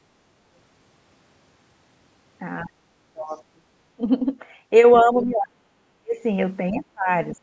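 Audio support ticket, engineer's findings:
Speech suppressed in double talk: five dips. 2.63–2.97 s and 3.13–3.67 s, roughly 30 dB down. Brief 15-dB-ish nick at 3.97–4.01 s. Worst at 5.03–6.19 s, around 40 dB, near cut-out. Then 6.71–7.10 s, roughly 30 dB. Likely the AEC seeing far-end and near-end together, failing to split them, and squashing both.

Background gated by the echo canceller: 7.38–7.43 s, right at the tail. Room tone drops about 16 dB for a blink. The canceller clamps the mic hard while the loudspeaker's active and releases after. Bandwidth tops out at 8 kHz, which fits the call mic chain and isn't part of this.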